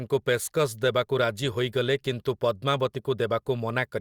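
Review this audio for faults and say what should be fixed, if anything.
Nothing here needs fixing; no faults are audible.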